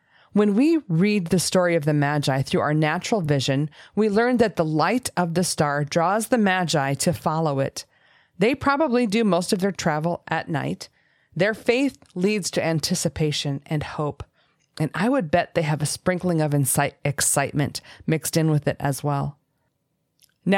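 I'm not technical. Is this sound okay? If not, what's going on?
No. At about 3.24 to 3.28 s there are chunks out of order: two 20 ms pieces of the speech play swapped, giving a brief jumbled blip. Unlike a dropout, nothing goes missing; the sound is all there, just shuffled.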